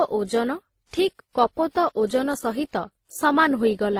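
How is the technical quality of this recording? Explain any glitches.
The quality is compromised throughout by stacked compression damage. Across the whole speech clip, this sounds like transcoding between lossy codecs. The chain is likely WMA, then HE-AAC, then low-rate Opus. Each stage re-encodes the previous stage's artefacts, so their different artefacts are heard together. On a spectrogram, patchy, blocky high-frequency energy appears, with nothing above about 20.1 kHz.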